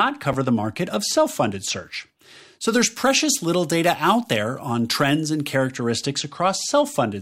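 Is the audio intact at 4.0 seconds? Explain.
No. At 4.0 s the speech sits inside a stretch of pre-emphasis left on, from 2.68 to 5.76 s. The CD 50/15 µs treble boost was never undone, leaving about 8 dB extra at 10 kHz relative to 1 kHz, so the sound turns thin, bright and sibilant.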